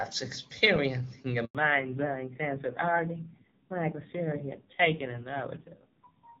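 At 1.45 s there's a handover gap: the call jumps between networks and no speech frames come through for about 100 ms, so the sound dies off quickly and sits in silence until 1.55 s, when the new link picks up. Whatever was said in that tenth of a second is simply gone.

Right after, from 1.55 s to the end, you get a fallback to narrowband. Up to the gap the call was on AMR-WB at 23.85 kbit/s, the HD Voice wideband codec, which at that rate sounds clear with little or no audible codec damage. After the switch it's on narrowband AMR at 5.9 kbit/s, so nothing above 4 kHz survives. The top end is lopped off, sibilants lose their edge, and at that low rate the speech sounds duller and rougher.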